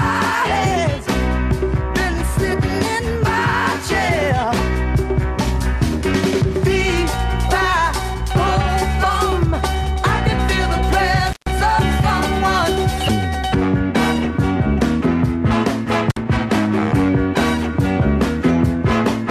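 Throughout the clip, the audio was likely passed through MPEG Layer II (MP2) compression starved of bits, consistent with a rate near 80 kbps. Upper sub-bands switch off and the rest are coarsely quantised, so the sound is dull, with a plainly audible gurgling, granular grain.

From 11.27 to 11.52 s an intermittent contact breaks the signal path, holding it open for about 136 ms. The sound drops out abruptly, with crackle where the connection breaks and remakes, and faint hiss fills the gap.

From 14.14 to 14.30 s DAB burbling appears. Bit errors at roughly a third of a percent slipped past error correction into the MP2 data, corrupting a run of frames (the span points to about eight). Wrong samples put short blips of noise into single sub-bands, giving a brief burst of burbling.

At 16.10 to 16.17 s the intermittent contact recurs, opening for about 53 ms. This shorter cut-out again has crackle at both edges and a thin wash of hiss in between.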